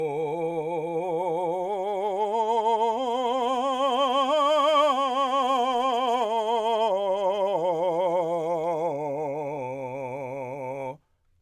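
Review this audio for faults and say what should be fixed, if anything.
Nothing here needs fixing; the music comes across without any faults I could pick out.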